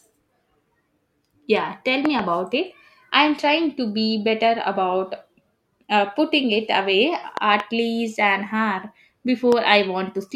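Speech, hit by loud pops, likely sudden voltage glitches from a switch or static: paired pops at 2.05–2.21 s and 7.37–7.62 s, and a single pop at 9.52–9.54 s, peaking about 10–15 dB above the speech.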